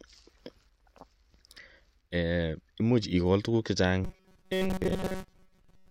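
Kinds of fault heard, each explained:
Robotic sound from repeated short buffers: new audio likely arrived too seldom, so a slice of about 5 ms was looped through most of the last two seconds, forcing a rigid 188 Hz metallic buzz onto the speech.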